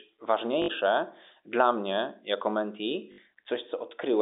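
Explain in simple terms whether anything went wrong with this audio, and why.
Two short hiccups, at 0.62 to 0.68 s and 3.12 to 3.18 s (right after "dla mnie jako mentee"), are packet loss with the last packet repeated. About 60 ms of audio went missing, likely three 20 ms chunks, so the receiver replayed the last chunk, which gives a quick robotic stutter. The muffled phone-line sound is just ordinary G.711 telephone coding.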